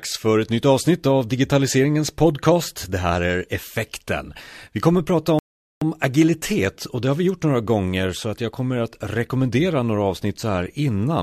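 At 5.39 s, right after "kommer att prata", the speech drops abruptly into silence and stays there until 5.82 s, then picks up again with "agilitet och det har" at exactly the point where it stopped, with nothing skipped. This is a rebuffering stall: the player exhausted its downloaded audio and paused playback until more data arrived. No audio is lost, but the gap inserts about 0.43 s of dead air into the speech.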